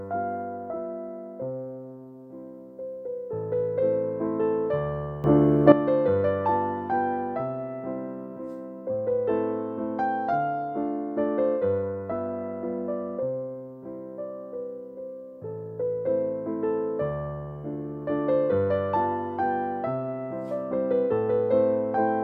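At 5.24 s the whole signal lurches up by about 12 dB, the sound and its background noise rising together in a single instant, and it stays at that raised level until 5.72 s, when it drops back just as abruptly. This is a sudden gain jump, likely caused by a digital gain change applied from one sample to the next with no ramp, such as a setting switch or bit shift taking effect instantly.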